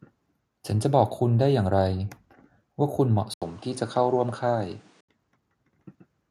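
At 3.34 s the speech cuts out for about 80 ms. It returns at similar loudness but duller, with a new noise floor about 35 dB down. Full bandwidth returns at 5.09 s. The likely cause is an input switched to a poorer device.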